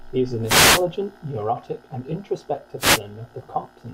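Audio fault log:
0.43–0.85 s and 2.78–3.00 s, wireless microphone noise hit: two brief bursts of hissing static swish over the speech, the first between "is an" and "neurotic and". The microphone's FM radio signal faded as reflected paths cancelled, and the receiver's noise surged up.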